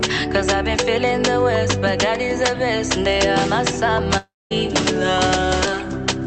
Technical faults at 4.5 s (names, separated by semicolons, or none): long network dropout